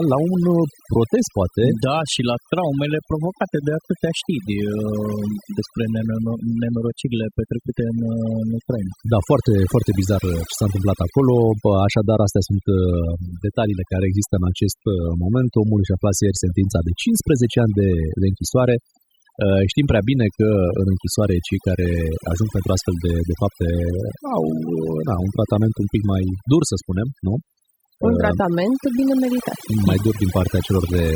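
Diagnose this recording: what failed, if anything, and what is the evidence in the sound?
The fault is overdone noise removal in the processing stage, and it runs through the whole speech recording. Between phrases the background drops. Small twinkling specks remain in those gaps. The noise reducer was set too hard. It pulls individual frequency bands far down whenever they sit close to its noise estimate. The quieter parts of the voice fall under that threshold and are removed along with the noise.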